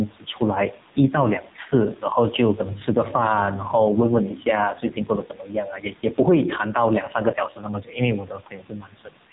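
From the start and throughout, the room's background noise, about 33 dB below the speech, rises in each pause and sinks whenever the talker gets loud, swinging by roughly 5 dB. This is gain pumping, likely from input gain set too high and a fast limiter clamping every loud syllable. It differs from a noise gate, which cuts the background to silence: here the noise never vanishes, it breathes with the speech, and peaks sound squashed toward the quiet parts.

Also present from start to finish, the speech passes through the AMR narrowband mobile codec with heavy damage. Nothing above 3.8 kHz survives, so sibilants lose their edge. The speech is rebuilt from a vocal-tract model driven by sparse pulses, giving a buzzy, synthetic tone, and the background noise warbles and swirls. That points to AMR-NB at a low rate, around 6 kbps. Plain band-limiting would sound muffled but natural, without this artificial buzz.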